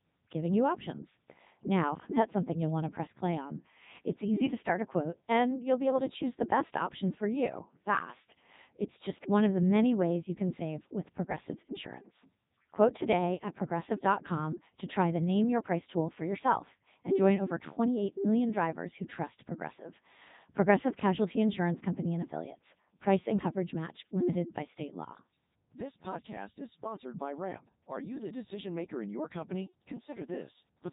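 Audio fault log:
Throughout: Codec 2 vocoder. The speech is rebuilt from pitch, voicing and spectral envelope as summed sine waves, so it sounds robotic and buzzy rather than smeared or warbly like a waveform codec, with nothing above 3.8 kHz. The heavy damage fits the 3.2 kbit/s mode.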